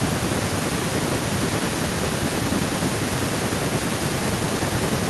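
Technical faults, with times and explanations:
Throughout: echo with no canceller, a thin copy of the speech about 22 dB down, trailing by roughly a fifth of a second, unlike short reverb tails.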